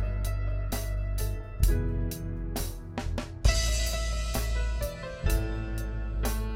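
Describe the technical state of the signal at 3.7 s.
At 3.7 s the music plays through intact, with no audible fault in the signal at that point.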